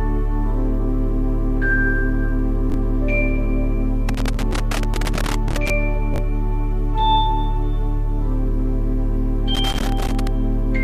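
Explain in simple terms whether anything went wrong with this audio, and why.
Chunks out of order at 2.70 s and 6.14 s: a 20 ms slice arrived one slot late and played after its neighbour, giving a brief jumbled blip.

Loose connector crackle from 4.08 to 5.70 s and 9.55 to 10.27 s: a worn or dirty contact kept breaking and reconnecting, chopping the sound into irregular scratchy crackles.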